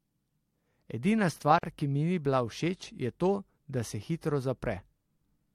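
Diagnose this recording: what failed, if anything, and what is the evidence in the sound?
The failure is at the codec stage: there's a gap at a join of encoded pieces around 1.59 to 1.63 s, roughly 48 ms long with smeared edges, right before "ki mi ni". Two separately encoded segments were butted together untrimmed, so encoder delay and end-frame padding survive as dead air.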